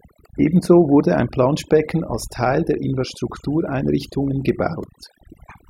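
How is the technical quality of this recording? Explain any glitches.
The recording is let down by overdone noise removal, present throughout. Bands sitting near the tool's noise estimate are pulled down or switched off, so the background drops and breaks up into twinkling specks. Unlike a noise gate, the cutting happens band by band, not to the whole signal at once.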